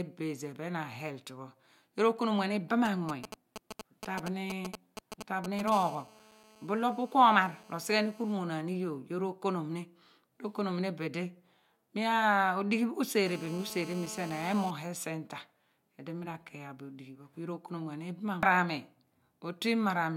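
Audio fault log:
2.85–5.70 s GSM signalling bursts: a galloping dit-dit-dit of brief 217 Hz buzz fragments, roughly 10 dB below the speech, as a nearby 2G phone sends short radio bursts that the audio circuit rectifies. It comes in groups, unlike a steady buzz.
5.72–8.33 s and 13.26–14.71 s GSM phone buzz: a continuous, raspy 217 Hz buzz rich in harmonics, about 21 dB and then about 15 dB below the speech. A phone in a call is transmitting 217 bursts per second, and the circuit rectifies every one, so the buzz does not break into groups.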